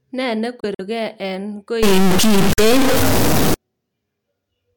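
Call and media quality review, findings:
Bluetooth dropout, 0.60–0.81 s: short silent holes, about 70 ms in total spread over roughly 190 ms, longest about 46 ms. Likely late packets discarded on the wireless link. Sound resumes further along rather than pausing, unlike a buffer stall.

Bluetooth dropout, 2.53–2.60 s: about 46 ms of audio lost, consistent with two lost frames. Same skip-ahead resumption, no repeated or stretched material around the gap.

Stuck bit, 1.83–3.54 s: distortion, likely a data bit held at one value in the converter or bus. Unlike clipping, it does not track loudness. Quiet stretches and pauses fill with noise.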